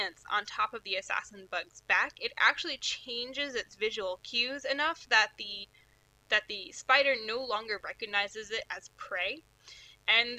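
A steady, raspy mains buzz runs under the audio from start to finish, sitting roughly 35 dB below the main signal. It comes from sharp switching spikes, such as from a dimmer, a rectifier or a missing shield, leaking in twice per cycle of the 50 Hz supply. On a spectrogram it shows as evenly spaced horizontal lines at multiples of 50 Hz, reaching up to several kHz. In the waveform, small repeating spikes appear every 10 ms.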